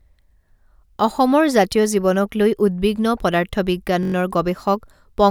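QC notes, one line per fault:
4.03–4.14 s, system hang loop: a 21.3 ms slice repeats five times, a buzz at 46.9 Hz as the stalled output cycles one buffer, likely 1024 samples.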